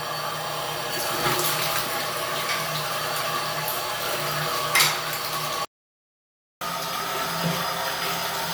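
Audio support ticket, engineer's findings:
Playback stall, 5.65 to 6.61 s: sound cuts out mid-flow for about 0.96 s, then resumes. Likely a player-side buffer underrun or a blocked audio thread starving the output. Waveform: flat silent gap with abrupt edges. Spectrogram: a clean vertical blank band across all frequencies, no decay tail into the gap.

Catch-up at higher speed, 6.61 s to end of clip: playback runs at 1.1x with pitch raised by roughly a semitone and a half. Player resampling the backlog to recover the time lost in the stall. Spectrogram: harmonics and features shifted upward, events compressed in time. Waveform: tighter spacing of transients than before 5.65 s.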